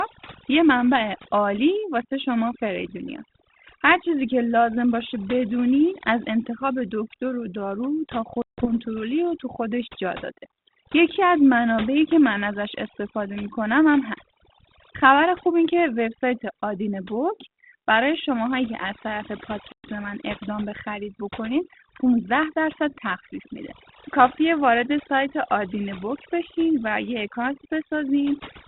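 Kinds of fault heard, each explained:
Overdone noise removal: Throughout, the background falls to near silence with twinkling specks. A noise reduction stage was set too strongly. Any frequency band that comes close to its noise estimate is pushed far down or switched off, so the quieter parts of the speech are removed along with the noise. The band-limited telephone sound carries the light coding grain of a 32 kbit/s G.726 link.
Packet loss on an ADPCM call: The speech drops into hard-edged silence twice, for about 160 ms at 8.42 s and about 120 ms at 19.72 s. Each time it comes back with a click, some distortion or a wrong level, then settles within a few tens of milliseconds. Several packets in a row were lost and filled with silence. That threw the decoder's adaptive predictor and step size out of step with the sender's until it recovered.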